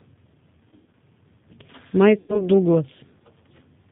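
G.729 codec damage runs through the whole of this speech clip: the line passes only about 150 Hz to 3.6 kHz, and rebuilding each 10 ms frame from a filter, pitch predictor and a few pulses at 8 kbit/s leaves the voice plainly rough and synthetic. VoIP packet loss concealed by the speech codec breaks in from 0.69 to 0.95 s, where about 180 ms goes missing in gaps scattered over roughly 240 ms, the longest gap 120 ms. It recurs from 2.20 to 2.49 s with about 90 ms lost. In each gap the decoder stretches its last pitch and filter into a fading buzzy tone or coloured noise, and the voice stays weak and smeared briefly after real audio resumes.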